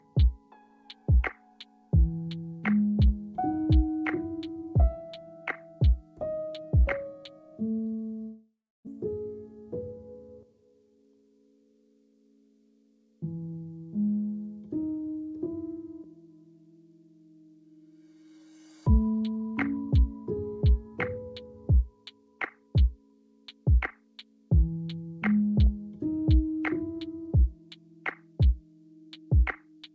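Audio carried over a wideband call link with nothing above 8 kHz. From 8.22 to 8.89 s the sound smears into a fading buzz, then falls silent for about 280 ms before resuming a little later in time. This is likely a long network dropout: about 600 ms of audio never arrived, and the receiver filled the gap by extending the last sound.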